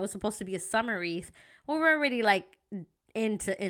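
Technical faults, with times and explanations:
No technical faults are audible.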